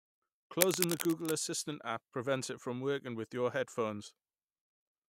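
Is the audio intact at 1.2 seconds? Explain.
No. At 1.2 seconds the speech is overlaid by cable scratch noise, which runs from about 0.59 to 1.33 s and ends just before "app prevents it from". It sounds like dense, irregular scratching and rustling at roughly the same loudness as the speech. The likely cause is a worn cable, connector or control being moved, so its contact resistance fluctuates rapidly and injects uneven bursts of noise into the signal.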